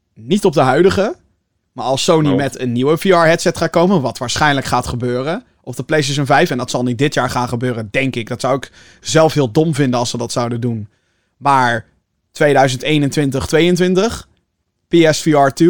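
Speech, with nothing technically wrong with it.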